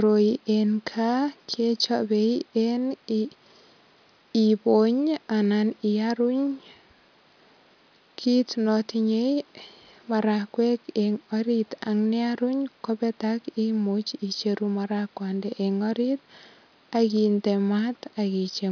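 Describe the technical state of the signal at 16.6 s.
At 16.6 s the speech signal is intact, with no audible fault at that point.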